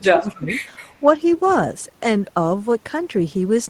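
From 0.14 to 0.56 s the speech sinks by roughly 20 dB. This is speech suppressed in double talk, likely an echo canceller turning down the near talker during overlap.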